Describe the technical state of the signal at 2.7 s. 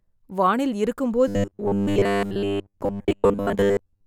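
At 2.7 s the speech has a rigid, metallic buzz pitched at 100 Hz, still loosely following the phrasing. This is robotic sound from repeated short buffers, running from 1.28 s to the end of the clip. The likely cause is audio arriving too slowly, so the playback keeps looping the last 10 ms of sound, which sets the fixed 100 Hz pitch, for most of the span while the actual signal in between is skipped.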